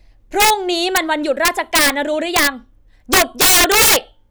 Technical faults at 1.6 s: integer overflow

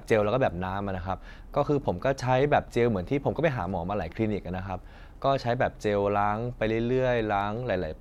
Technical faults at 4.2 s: clock slip clicks

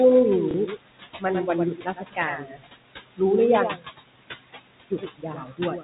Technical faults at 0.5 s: doubled audio track; noise suppressor artifacts; packet loss with last packet repeated

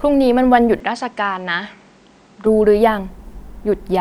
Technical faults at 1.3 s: input switched to a poorer device

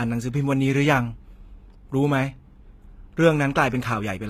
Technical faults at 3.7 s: HE-AAC compression

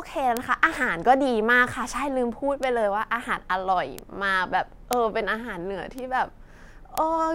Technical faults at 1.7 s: none

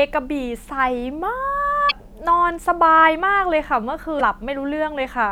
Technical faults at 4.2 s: damaged data in a compressed stream

